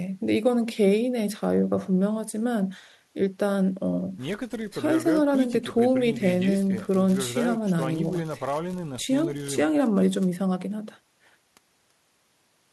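No faults detected anywhere in the speech recording.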